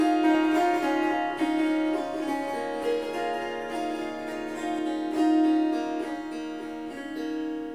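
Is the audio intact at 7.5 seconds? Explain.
Yes, the audio is intact at 7.5 seconds, with nothing there breaking up the everyday sound.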